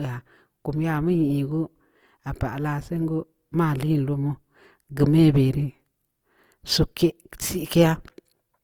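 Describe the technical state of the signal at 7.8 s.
At 7.8 s the speech carries Opus compression, present across the whole clip. The grainy, rough texture points to a low-rate music-mode encode, likely near 24 kbps, where starved bands are refilled with folded or noise-like content. A spectrogram shows energy reaching 20.2 kHz but speckled, noisy high bands.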